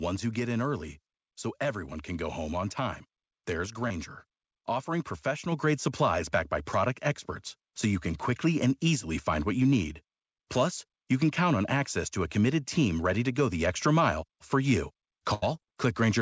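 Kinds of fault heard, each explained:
short concealed packet loss: A brief smear of about 20 ms at 3.88 s, just after "home on time there's". A sliver of the call reached the decoder too late, so the receiver stretched the preceding sound across the hole, then blended back into the real audio.
microphone volume stepped up: At 5.52 s the whole sound, background included, jumps about 5 dB louder in a single step, right before "grade supplies backed by". The call software judged the microphone too quiet and raised the device's input volume at once.
burst of packet loss: From 15.34 to 15.44 s, after "extra mile for you", the sound becomes a held, fading continuation before picking up further on. About 80 ms never arrived in time, and the receiver extended the last sound while turning it down, so that stretch is missing.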